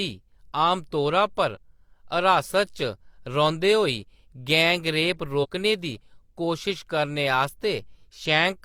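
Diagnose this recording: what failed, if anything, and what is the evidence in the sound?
Damaged data in the compressed stream, at the codec stage: brief disruptions at 1.52–1.57 s, after "आमतौरा पर", and at 5.40–5.46 s, after "होई गैंग रेप". The decoder misreads the corrupted frames until it resyncs. A spectrogram shows short broadband smears; the waveform shows abrupt discontinuities.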